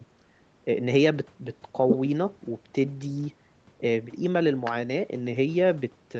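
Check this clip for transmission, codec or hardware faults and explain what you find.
No transmission, codec or hardware faults turn up in this speech, which passed through normal call microphone processing and an Opus call path with nothing above about 8 kHz.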